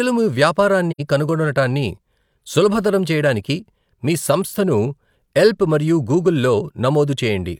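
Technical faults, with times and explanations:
0.91–1.00 s, AAC frame loss with muting: the speech drops out into a brief silent hole. Its length, about 85 ms, fits two lost AAC frames. The decoder had no data for those frames, so it filled their spectrum with zeros. The overlapping transform windows blend into that silence, fading the sound out before the gap and back in after it. This gives the hole soft edges rather than an abrupt cut.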